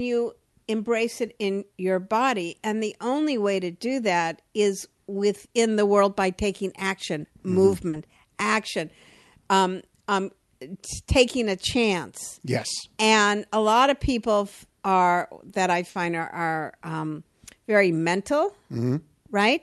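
At 7.89 to 7.95 s, about 40 ms of audio failed to arrive in time, a short concealed packet loss; the receiver extended the preceding sound, leaving a brief smear or wobble. At 15.89 to 15.97 s, just after "people are that i", a burst of packet loss removed about 60 ms, which the receiver bridged with a fading continuation before the speech resumes further on.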